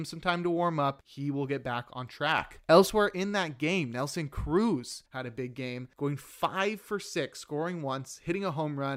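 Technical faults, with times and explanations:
2.38–2.90 s, sudden gain jump: after "will get back on", voice and background leap about 6 dB together until "in that game", likely an unramped gain change.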